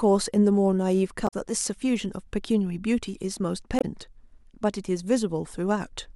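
Speech with damaged data in a compressed stream at 1.24–1.34 s and 3.78–3.84 s. Corrupted bytes there leave the decoder misreading frames and losing sync until it locks onto a valid header, producing short glitches of about 100 ms and 70 ms.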